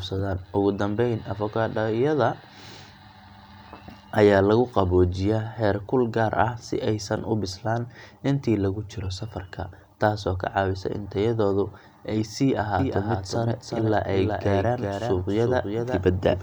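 From 12.79 s, just after "in tayadoodu ay sii", a doubled audio track appears, most likely because the same speech is being captured a second time through a slower path and mixed back in. A full-band copy trails the original by roughly 400 ms, about 5 dB quieter, with no decay or room colouring. It cuts in abruptly and runs to the end, so every syllable is followed by a clean, softer repeat that blurs the speech into overlapping layers.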